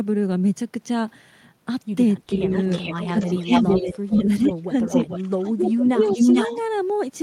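From 2.32 to 4.47 s an echo leak, likely from a loudspeaker echo canceller missing pickup, returns the sound about 433 ms late and about 10 dB down, visible as a faint repeated spectrogram pattern. Speech suppressed in double talk, likely the canceller ducking both sides, gives a slight dip at 2.36–2.52 s, then a deep one of about 25 dB across 3.08–4.91 s, carved as waveform gaps. A second leak, 4.87–6.55 s at 438 ms, runs louder than the speech itself, while suppression dips about 15 dB between 5.22 and 6.17 s.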